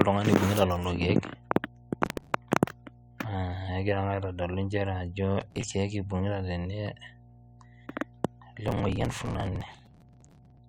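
A steady 60 Hz mains hum sits under the speech throughout, roughly 25 dB down. A ground loop or nearby transformer is feeding the power line in. Processor overload crackle tears through at 2.05–2.34 s, 5.38–5.64 s and 8.68–10.58 s. The processor misses deadlines on very short buffers, a few milliseconds each, and skips them. Around 220 tiny hard-edged gaps in all make a gritty crackle. The last burst is longest.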